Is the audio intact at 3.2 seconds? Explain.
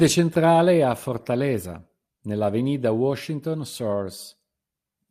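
Yes, the speech at 3.2 seconds is intact, with no dropout, click, distortion or other fault audible at that moment.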